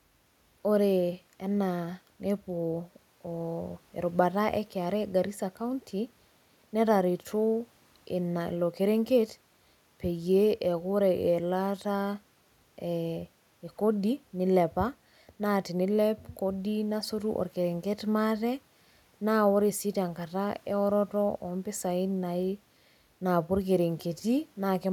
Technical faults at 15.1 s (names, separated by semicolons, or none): none